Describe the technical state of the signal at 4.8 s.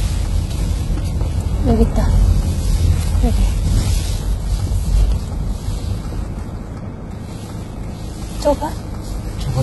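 At 4.8 s the audio was likely squeezed through HE-AAC compression at a very low bitrate, about 16 kbps, for the whole clip. The treble is rebuilt by copying lower bands upward and stops at 11.8 kHz, so the top sounds gritty and metallic.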